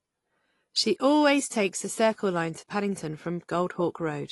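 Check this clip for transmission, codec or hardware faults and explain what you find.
There is one fault, present for the whole clip: the speech carries plainly audible damage from lossy coding, most likely AAC compression. Nothing is present above 11.5 kHz, which dulls the sibilants, and the remaining spectrum sounds smeared, with a warbling texture. AAC-LC quantises each block of frequency lines against a hearing model and discards what it judges least audible. A low, hard band limit of this kind, with that quantisation texture, fits a low bitrate of around 32 kbps.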